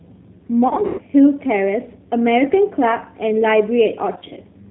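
Speech squeezed through the G.729 codec the whole way through. Nothing above 4 kHz gets through, and everything sounds a bit rough and synthetic, which fits an 8 kbit/s VoIP link. There's also VoIP packet loss concealed by the speech codec, at 0.68–1.02 s and again at 4.13–4.39 s. The decoder papers over the missing audio by stretching the last sound into a fading buzzy tone or coloured noise, worst in the first burst with a 120 ms run lost, and the speech stays weak briefly afterwards.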